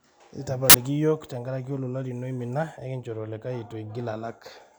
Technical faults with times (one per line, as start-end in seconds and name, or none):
0.70-0.74 uninitialised buffer